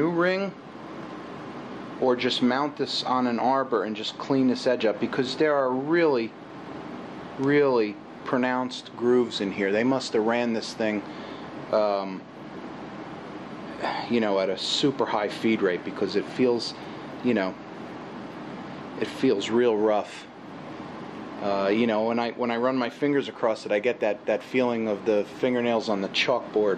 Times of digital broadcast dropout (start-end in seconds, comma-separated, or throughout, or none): none